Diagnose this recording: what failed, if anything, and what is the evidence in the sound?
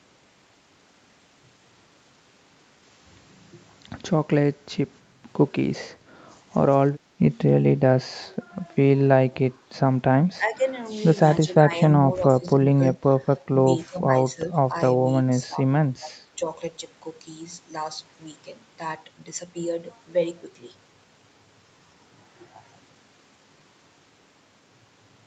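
Call processing fault: the speech dips in short bursts at 10.37–10.6, 11.46–11.72, 12.18–13.28, 13.89–14.74, 15.46–15.58 and 15.98–16.47 s, by up to about 15 dB. This is likely speech suppressed in double talk, where the echo canceller ducked the near talker.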